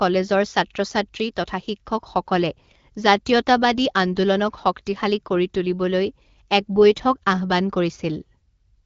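The speech comes through an AMR wideband (HD Voice) link at 12.65 kbit/s, where the coding leaves only light marks on the sound, and no technical faults can be heard anywhere in the clip.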